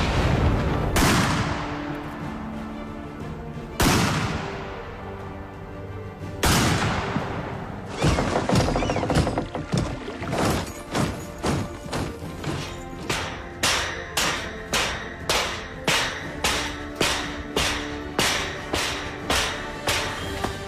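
Nothing is technically wrong with this audio.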